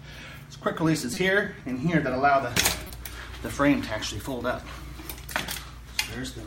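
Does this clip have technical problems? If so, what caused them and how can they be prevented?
Yes. Corrupt frame decoded at 1.14–1.17 s and 2.87–2.90 s: a single damaged compressed frame played anyway, misread codes throwing energy to wrong frequencies as a short chirp, squeak, blip or burst of noise. Using checksums so the decoder conceals or drops damaged frames instead of playing them would prevent this.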